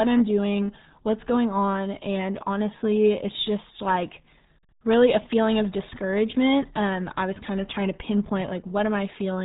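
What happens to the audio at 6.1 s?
At 6.1 s the speech carries the same RealAudio 14.4 codec damage heard across the whole clip, so nothing changes there specifically. The codec squeezes speech into a very low data rate, consistent with an 8 kbit/s stream, by modelling it coarsely, and it discards everything above about 3.9 kHz. The result is muffled, dull speech with a heavy gargly, watery texture where the coarse modelling smears consonants and vowel transitions.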